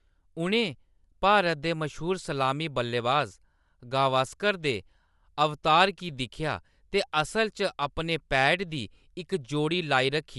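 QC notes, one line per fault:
Throughout: Bluetooth LC3 compression, likely the cause of what is heard. The speech has a plainly audible breathy, grainy edge, and nothing is present above 11.6 kHz. LC3 codes short transform frames and, when bits run short, discards upper-spectrum detail and fills those bands with shaped noise. The grain suits 10 ms frames at around 48 kbps, and the hard ceiling points to the chosen sample rate limiting the band.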